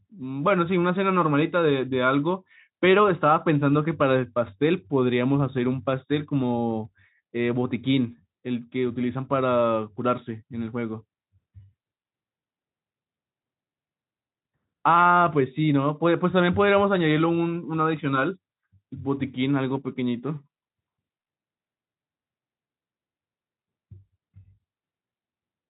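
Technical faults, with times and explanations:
Nothing stood out as a technical problem on listening to this speech recording.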